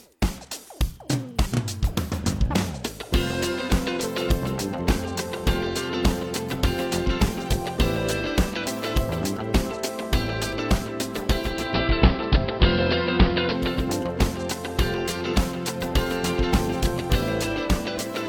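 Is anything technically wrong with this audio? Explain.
Yes. From 11.36 s to 13.96 s the audio shows digital radio blending to analogue: the receiver lost the digital stream and cross-faded over about 0.46 s to the station's AM broadcast, then back. AM's narrow channel removes much of the treble, so the sound turns dull and boxy. The level shifts by about 4 dB, and hiss rises to roughly 30 dB below the signal.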